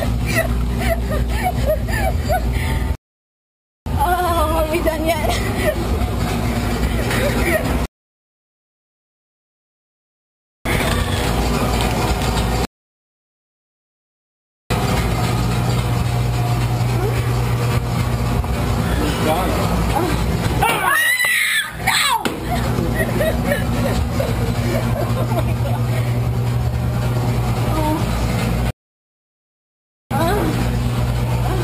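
The sound drops into dead silence four times, then picks up again exactly where it left off, with nothing skipped. The gaps run from 2.95 to 3.86 s, 7.86 to 10.65 s, 12.65 to 14.70 s, and 28.71 to 30.11 s. They last about 0.9, 2.8, 2.1 and 1.4 s. Each is a rebuffering stall: playback used up the audio it had downloaded and waited for more to arrive. The pauses add time but lose no material.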